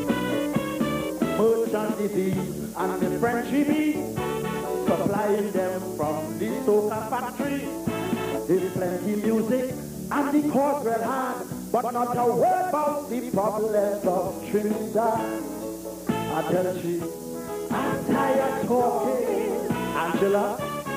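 No technical faults can be heard anywhere in the recording. Nothing in the audio breaks, drops out or changes character at any point.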